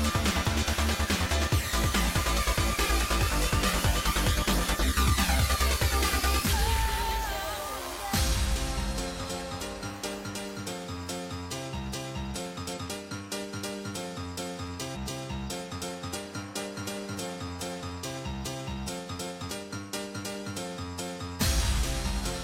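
At 4.79 to 4.85 s, 12.73 to 12.79 s and 14.91 to 14.97 s the sound abruptly leaps forward, with a short disturbance at each join. These are compressed frames skipped: the decoder either could not find or rejected whole blocks of encoded audio, so playback resumes further on. The gaps work out to around 150 ms, 100 ms and 150 ms of lost material, which fits two or three frames of roughly 46 ms each.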